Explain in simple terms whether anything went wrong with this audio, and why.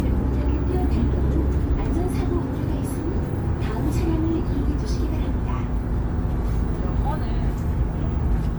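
Generation loss runs through the whole clip: it sounds swirly and hollow, and sharp starts come out blurred. That's most likely from being saved as MP3 over and over, about five times, with each pass adding fresh smearing on top of the last.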